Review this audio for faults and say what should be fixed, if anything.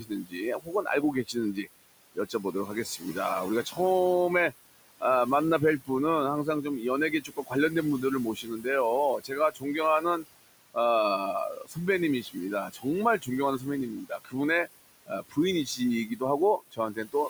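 Noise suppressor artifacts run through the whole clip. The suppressor pulls the steady room noise, which sits about 15 dB under the speech, down by about 20 dB. It makes that decision frame by frame and band by band, so the noise floor drops away in the gaps and comes back up under the speech. To prevent it, reduce the suppression depth and lengthen the gain smoothing so the floor stays steady.

Speech cut by the noise suppressor happens in three stretches: 0.0 to 3.79 s, 7.11 to 10.77 s, and 11.5 s to the end. Here the suppressor treats low-level parts of the speech as noise, so quiet consonants and word endings are turned down along with the background, by about 18 dB in the first stretch and about 21 dB in the other two. Roughly a second of speech is affected in each of the first two stretches and about two seconds in the last. Those parts sound swallowed or faint. To prevent it, raise the speech-presence threshold or use gentler attenuation so soft speech is not classified as noise.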